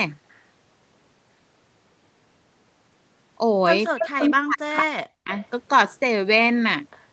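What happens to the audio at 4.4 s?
An echo canceller likely mistook overlapping talk for echo between 3.92 and 5.32 s, so this speech suppressed in double talk drops by around 40 dB, gapping for about a second.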